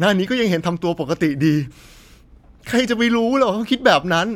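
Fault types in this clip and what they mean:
No technical faults detected.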